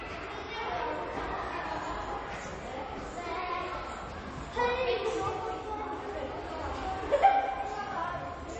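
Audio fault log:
Throughout: MP3 compression, likely the cause of plainly audible codec damage. Nothing remains above 8.3 kHz, and weak frequency components flicker on and off between frames, giving a watery, swirly texture with smeared attacks, which fits a low bitrate around 32 kbps.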